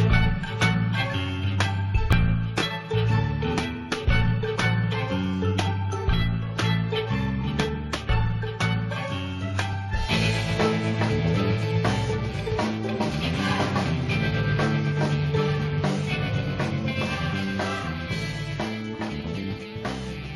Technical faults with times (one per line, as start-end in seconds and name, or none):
2.12 overlap between stream segments